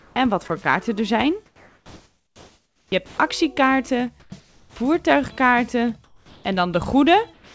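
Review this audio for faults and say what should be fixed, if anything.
Comfort noise in place of the background: discontinuous transmission likely halted sending during pauses, so synthetic noise replaced the real background at 0.0 to 0.16 s, 4.2 to 4.76 s and 6.04 to 6.44 s. That noise sounds flat and featureless and drops about 6 dB and about 4 dB in level. To prevent it, disable discontinuous transmission or match the comfort-noise level and spectrum to the real background.

Sound dropped by the voice detector: the detector likely misjudged low-level sound as background and stopped sending. At 0.48 s a 20 ms slice is replaced by comfort noise, and from 7.34 to 7.55 s about 100 ms of sound is lost. To prevent it, lower the detection threshold and add a longer hangover after activity.

Sound chopped by the voice detector: the detector likely toggled repeatedly between sending and pausing from 1.46 to 3.18 s. 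Quiet portions drop out intermittently. To prevent it, add hysteresis and hangover so the detector cannot switch states rapidly.

The call path's band stops at 8 kHz, which fits a wideband codec such as G.722.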